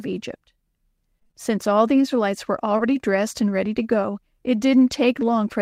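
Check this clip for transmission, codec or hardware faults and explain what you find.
Three transmission faults are audible in this speech clip, all from packets lost on the network path.

From 1.19 to 1.35 s there is repeated packet loss (robotic sound). The audio turns choppy with pieces missing because four separate gaps, the longest 24 ms, were each patched by extending the preceding sound. Half of that stretch is filled-in audio.

From 2.77 to 2.81 s, just before "dressed and ready to", a short concealed packet loss produces a brief smear or wobble. About 20 ms never arrived, and the receiver bridged the hole by continuing the last sound.

Within that same moment, from 2.79 to 2.81 s, a lost packet was rebuilt from error correction. The 20 ms sounds rougher and noisier, because the decoder played a low-bitrate backup copy carried in the following packet.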